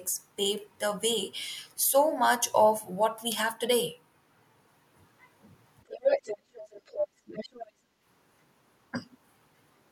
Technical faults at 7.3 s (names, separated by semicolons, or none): speech suppressed in double talk; other side's voice leaking through